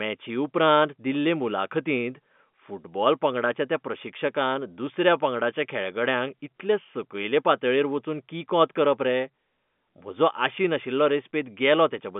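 No faults can be heard anywhere in this recording.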